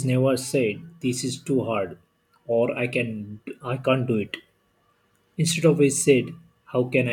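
No audible technical faults.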